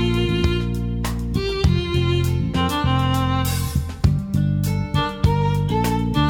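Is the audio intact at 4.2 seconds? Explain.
Yes, the audio is intact at 4.2 seconds, with no dropout, click, distortion or other fault audible at that moment.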